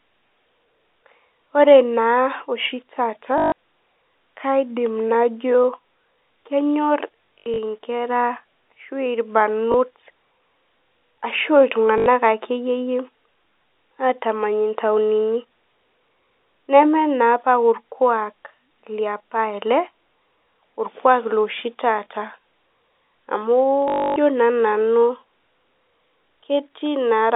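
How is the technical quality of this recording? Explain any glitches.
The recording has five short dropouts where packet loss was concealed by repeating the last packet. The sound comes through a G.711 telephone channel, band-limited to roughly 300 Hz to 3.6 kHz.

The packet loss with last packet repeated occurs at 3.38–3.52 s (140 ms), around 7.38 s (160 ms lost in bursts over about 320 ms, the longest 80 ms), 9.72–9.74 s (20 ms), 11.98–12.06 s (80 ms) and 23.88–24.16 s (280 ms). At each gap the receiver kept replaying the previous packet. Those repeats don't align with the pitch period, and the longer runs produce a buzzy, robotic stutter at the packet rate, about 50 Hz, which fits 20 ms packets. The 280 ms run at 23.88 s is the longest.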